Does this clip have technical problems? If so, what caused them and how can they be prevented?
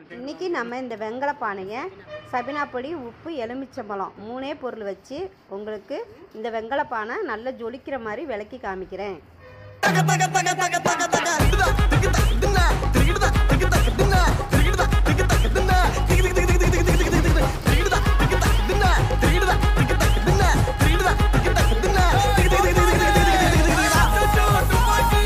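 No, nothing technical goes wrong anywhere in this one, so there's nothing to trace back or guard against.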